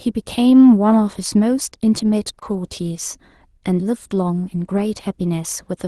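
Short concealed packet loss, 2.39 to 2.43 s: about 20 ms of audio arrived too late for the decoder, and roughly 18 ms of that gap was filled by extending the preceding sound before blending back into the real signal, leaving a brief smear or wobble.

Lost packet rebuilt from error correction, 2.41 to 2.43 s: overlapping the end of that gap, a 20 ms stretch, which fits a single lost packet, was played from the low-bitrate Opus in-band copy carried in the following packet. That stretch sounds rougher and noisier than the audio around it, within the call path's 12 kHz bandwidth.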